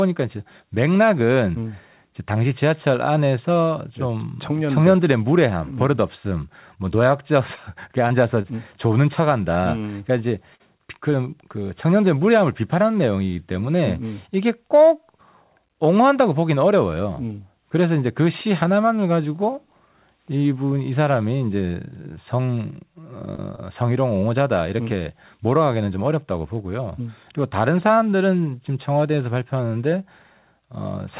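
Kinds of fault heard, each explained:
Short concealed packet loss: five 20 to 40 ms gaps missed the decoder; the receiver extended the preceding sound, leaving smears or wobbles around 8, 10.6 and 23.4 s.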